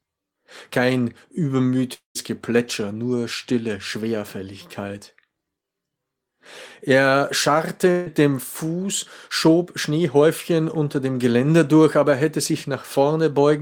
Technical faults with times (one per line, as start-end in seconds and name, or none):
1.93-2.17 long network dropout
7.91-8.08 long network dropout